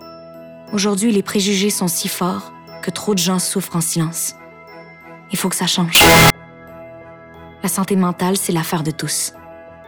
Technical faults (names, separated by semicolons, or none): float read as integer